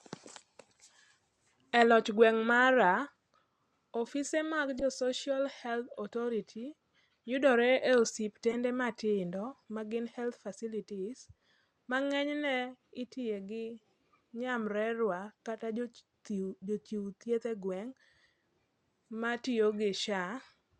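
At 4.78 to 4.82 s and 8.51 to 8.55 s, a corrupt frame was decoded. Flipped bits scatter energy wrongly across a few frames, giving brief chirps, squeaks, blips or bursts of noise peaking near -25 and -20 dBFS.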